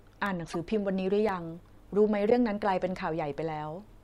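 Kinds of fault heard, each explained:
Periodic USB or driver dropouts: Something on the system stalls the USB link or audio driver once every 1.024 s, and each stall drops a tiny slice of audio, roughly a millisecond, which is filled with silence. Through this speech clip that gives evenly spaced clicks from 0.26 s to 3.33 s, about four in all, each a small tick cut into the signal with a steady rhythm that sets it apart from the other faults.
Corrupt frame decoded: Bit errors damaged a few compressed frames, and the decoder played them anyway, so misread gains and codes put energy at the wrong frequencies for the span of those frames. Here it happens twice. From 0.46 to 0.56 s an error, peaking around -25 dBFS, sits over the speech. From 2.26 to 2.32 s a louder error, around -10 dBFS, cuts in.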